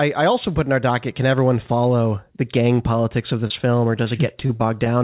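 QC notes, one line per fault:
3.47–4.87 s, repeated packet loss (robotic sound): right after "the gang politics of", the speech turns choppy as eight short dropouts, none longer than 36 ms, arrive in quick succession. Each hole is bridged by stretching the preceding sound, so roughly a tenth of the stretch is repeated material. A spectrogram shows smeared, looped harmonic slices below the 4 kHz ceiling of what sounds like a G.711 call line. The waveform shows copied cycles and abrupt joins.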